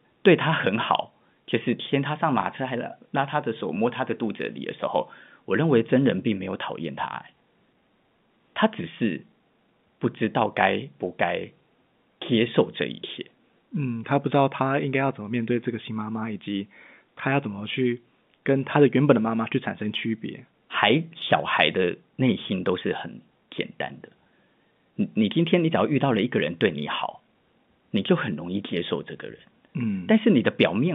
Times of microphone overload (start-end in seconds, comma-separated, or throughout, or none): none